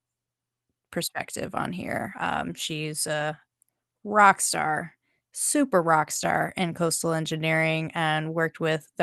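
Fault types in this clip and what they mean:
Nothing to flag here: the speech comes through the call path the usual way, with no faults to list.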